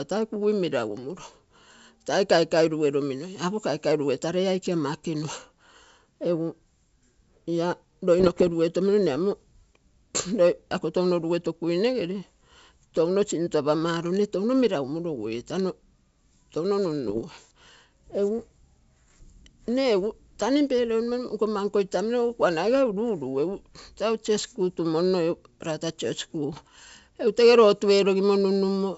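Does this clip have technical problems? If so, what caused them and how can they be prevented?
Yes. Bit errors on an ADPCM link at 8.20–8.52 s, 17.07–17.23 s and 26.53–26.68 s: flipped bits upset the decoder's step size and predictor, causing pops and rough bursts. Error protection or a cleaner transmission channel prevents this.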